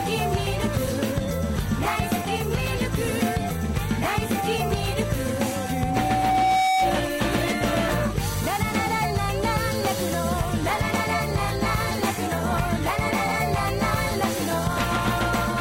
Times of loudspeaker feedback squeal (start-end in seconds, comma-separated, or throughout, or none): 5.36-7.07